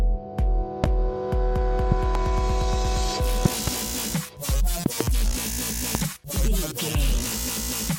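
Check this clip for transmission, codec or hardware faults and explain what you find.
A hardware fault shows up as repeated loud pops. A voltage step, likely from a plug, switch, static or driver glitch, gets added to the signal and is shaped by the following circuitry. Single pops land at 0.84–0.86 s and 5.95–5.97 s, and doubled pops at 1.92–2.18 s, 3.45–3.70 s and 4.86–5.03 s. Each jumps roughly 15 dB above the sound, which continues underneath.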